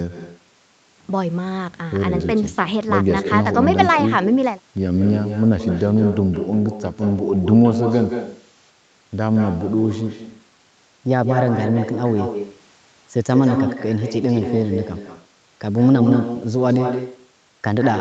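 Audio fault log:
Throughout, echo with no canceller: every phrase is trailed by its own ghost about 8 dB down, arriving roughly 150 ms later, so the sound picks up a thinner, doubled edge. The far end's loudspeaker is feeding the microphone and nothing is subtracting it, so the signal makes the round trip and comes back thinner. The echo sits inside the same 8 kHz band the call path passes.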